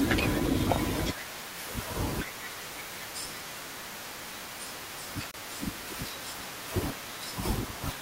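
A speech clip with a gap at a join of encoded pieces: about 28 ms of silence at 5.31–5.34 s, with smeared edges, where separately encoded segments meet. Unlike a dropout, the sound resumes exactly where it stopped.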